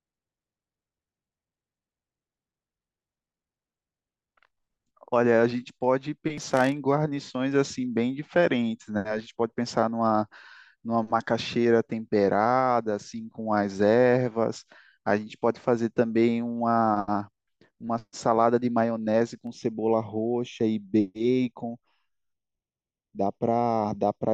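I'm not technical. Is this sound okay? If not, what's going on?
No. Channel delay (comb filtering) sets in at 19.47 s and lasts until the end. One side arrives a fraction of a millisecond late. When the two are combined, certain pitches cancel, starting around 1.5 kHz, so the speech sounds hollow and phasey.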